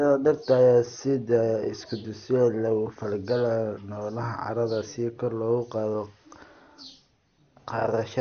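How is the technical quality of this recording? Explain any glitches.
The recording is noticeably degraded throughout. The likely cause is MP2 compression at a low rate, fitting roughly 48 kbps. Upper sub-bands lose their bits, leaving nothing above 6.5 kHz, so the speech sounds dull, gurgling and granular.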